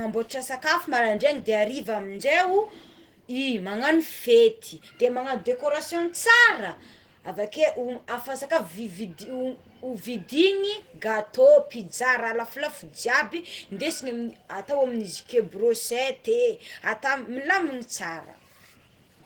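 Throughout this speech clip, Opus voice compression at a low bitrate, consistent with roughly 16 kbps in hybrid mode, codes the voice coarsely, leaving it plainly hoarse, slightly muffled and faintly robotic.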